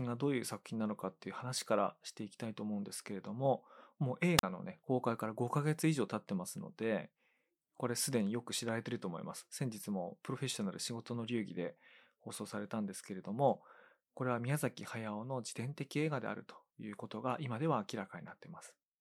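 A speech recording with a wireless microphone squelch dropout at 4.38 to 4.43 s: the radio signal fades, hiss swells, then the receiver mutes for about 42 ms.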